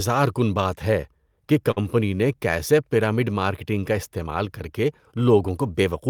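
Speech, with a short stall from a late packet between 1.71 and 1.79 s: a packet missed its playout time, the jitter buffer ran dry, and the receiver held the preceding sound for about 52 ms before resuming where it stopped. Nothing is lost, but playback runs 52 ms later afterwards.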